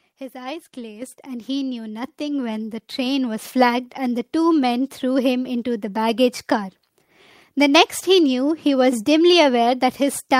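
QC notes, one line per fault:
1.02 s and 2.04 s, microphone volume stepped up: the call software judged the microphone input too quiet and raised the device's input volume in a single step, first by about 8 dB and then by about a further 4 dB. Because the gain changes before any processing, the speech and the background noise jump up in level together at each point. The second step adds to the first, leaving the audio louder from 2.04 s on.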